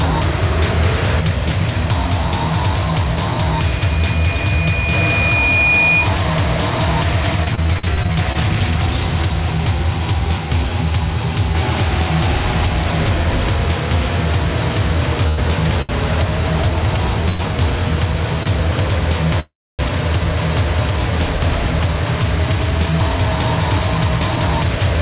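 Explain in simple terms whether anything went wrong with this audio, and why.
Yes, several things went wrong, all typical of an internet call.

From 3.54 to 6.17 s there is loudspeaker feedback squeal: a single high whistle near 2.4 kHz swells over about two seconds, because the microphone picked up its own loudspeaker. Unlike the glitches below, it is a steady pure tone, not broken or missing sound.

From 7.44 to 8.36 s, repeated packet loss (robotic sound) makes the audio choppy. Eleven small pieces of data never arrived, and each hole was patched by repeating the last sound. About a quarter of that stretch is patchwork, and real sound is lost.

Short stalls from a late packet occur at 15.28 to 15.40 s, 15.82 to 15.91 s and 18.43 to 18.48 s. Each time a sound is held a fraction too long, for about 0.09, 0.07 and 0.03 s, then carries on. The data arrived late, not lost, so nothing is missing.

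Call audio freezes appear at 17.29 to 17.41 s and 19.40 to 19.81 s, likely from data held up on the network. The second is longer. A held sound fades to nearly 0.3 s of silence before the sound resumes where it stopped. It is a longer, emptier gap than a stall.

From 21.51 to 24.76 s, a jitter buffer speed-up makes the sound run about 7% faster at the same pitch, dropping roughly 0.2 s in total to catch up after the earlier delays. It sounds hurried rather than choppy.

The whole call also sounds like a telephone, with nothing above 4 kHz, because of its phone-grade audio format.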